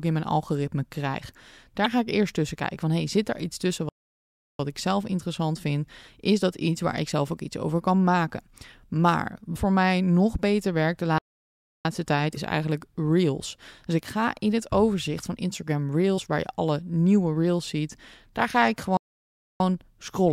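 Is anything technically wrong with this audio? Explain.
Yes. The speech has two kinds of fault.

Damaged data in a compressed stream occurs at 1.82 s (after "in mijn algoritme krijg", before "ga ik eerst tussen"), 9.52 s, 12.33 s and 16.14 s (before "waar je alle nieuwe"). Corrupt bytes make the decoder misread frames and resync. Each event lasts about 40 ms.

A playback stall happens three times, at 3.89 to 4.60 s, 11.18 to 11.85 s and 18.97 to 19.60 s. Each gap lasts about 0.63 to 0.70 s. The first falls between "zit daar iets tussen" and "ik zelf interessant vind". The speech stops dead, then resumes. The player was likely starved of data.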